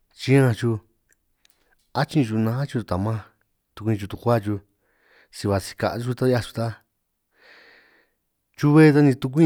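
From start to finish, the speech carries a block size mismatch with truncation. One stage hands over longer blocks than the next stage takes in. The tail of every block is dropped. Each cut leaves a small discontinuity, and these repeat steadily. The result is a buzz at about 46.9 Hz under the voice. That rate fits 1024-sample blocks. So little is lost per block that the pace stays at normal speed, and the pitch is unchanged.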